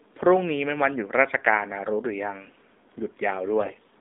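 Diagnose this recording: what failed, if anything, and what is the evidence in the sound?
AMR narrowband mobile codec damage runs through the whole clip, at the codec stage. The speech is confined to about 250 Hz to 3.7 kHz and sounds buzzy and synthetic, which points to a low AMR-NB mode near 7.4 kbps. With so few pulses driving the vocal-tract model, the speech loses its natural texture.

AMR bit errors, from 3.60 to 3.80 s, occur at the network stage. The speech keeps its pitch and level but turns hoarse, scratchy and gargly for about ten 20 ms frames. Roughly 7 percent of the weakly protected bits were corrupted, which misplaced the excitation pulses and skewed the pitch, gain and spectral values.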